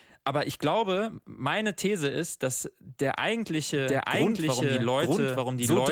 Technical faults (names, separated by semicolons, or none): doubled audio track